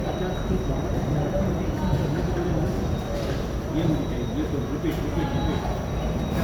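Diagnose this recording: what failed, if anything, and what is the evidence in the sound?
Codec stage: the whole clip sounds swirly, hollow and smeared, with blurred attacks, likely generation loss from around seven passes through something like 128 kbit/s MP3.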